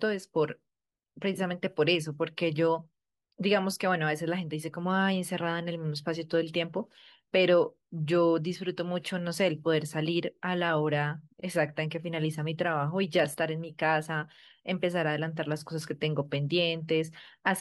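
No technical faults can be heard anywhere in this speech.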